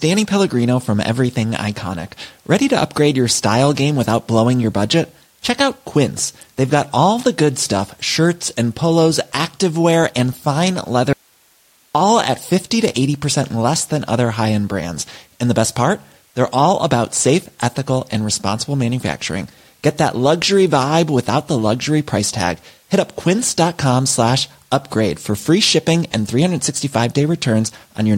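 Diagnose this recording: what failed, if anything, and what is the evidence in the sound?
Right after "polos activewear and fine", at 11.13 s, the speech drops out abruptly for about 0.82 s, coming back at 11.95 s. This is an audio dropout to a faint residue: the gap isn't silent but holds hiss about 40 dB below the speech. The cut is too sharp for a pause. The likely cause is a brief break in the analogue wiring upstream, with the preamp and converter still running and passing their own noise floor.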